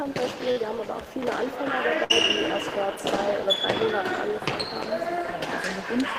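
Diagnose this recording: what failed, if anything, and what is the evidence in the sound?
The network failed, with two bursts of packet loss. The first runs from 0.51 to 0.58 s, the second from 2.04 to 2.12 s. In each, the last sound is held and fades, about 47 ms and then 57 ms of it. The audio then resumes further on. Roughly 40 ms and 60 ms of material are skipped. The receiver had nothing to play, so it stretched and faded what came before.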